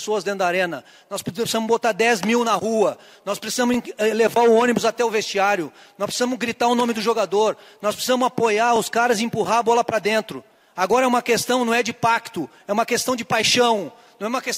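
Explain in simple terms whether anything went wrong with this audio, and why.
Something did go wrong. The audio has overlapping chunks. It was handled in pieces about 5 seconds long, and each new piece started slightly before the previous one finished. So a tiny slice, about 20 milliseconds, plays twice at each join. You hear this as a brief click or stutter at 3.74, 8.76 and 13.78 seconds. The steady spacing between them is the clue that chunk boundaries are to blame.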